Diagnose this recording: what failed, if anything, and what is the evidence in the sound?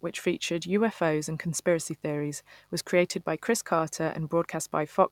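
Mains buzz enters at the analogue wiring stage and runs throughout the speech, a steady raspy buzz roughly 40 dB below the voice. On a spectrogram it shows as unbroken horizontal lines at harmonics of 50 Hz reaching several kHz. The waveform carries sharp switching spikes, twice per mains cycle, from a dimmer, rectifier or broken shield.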